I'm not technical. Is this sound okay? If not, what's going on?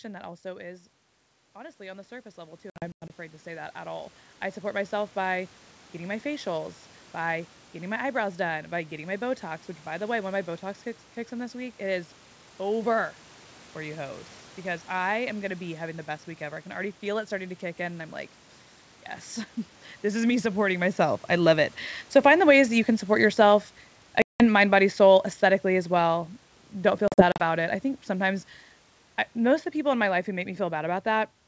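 No. Around 0.4 s the speaker moves away from the microphone, and the automatic gain rising kicks in: the call's volume control senses the input has gone too quiet and turns itself up step by step until about 5.0 s, just before "by getting my facials". You hear the voice and room background swell together over those few seconds.

There are three packet loss on an ADPCM call events, where chunks of the call never arrived and were filled with silence. From 2.70 to 3.11 s, gaps add up to about a fifth of a second, the longest a tenth of a second. At 24.22 to 24.44 s there is about 0.18 s of loss. From 27.08 to 27.43 s there are short scattered gaps totalling about 0.14 s. Each leaves abrupt holes, and because the decoder loses track of the sender, the sound right after each gap comes back briefly distorted before settling.

The automatic gain falling runs from about 22.03 s, after "myself I love it", to 31.27 s. 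The volume control decided the input was too loud, or its background too strong for its setting, and turned itself down. The voice and background gradually sink in level together. This follows the speaker shifting position around 21 s.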